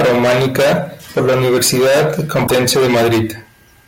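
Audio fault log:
2.44–2.51 s, damaged data in a compressed stream: a short glitch cuts through the speech for about 76 ms. Part of the coded stream at this point is corrupt. The decoder misreads or refuses the frames there. It then loses frame sync and has to search for the next good header.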